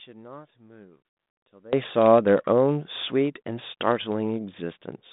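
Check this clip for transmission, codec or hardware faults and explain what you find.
One fault is present, in the first 1.73 s. From 0 to 1.73 s the speech drops by about 23 dB to a faint residue. The likely cause is one channel inverted, so the shared centre cancels in mono. Unlike a dropout, a faint copy remains. The band-limited telephone sound, with nothing above 3.8 kHz, matches the G.726 path at 32 kbit/s.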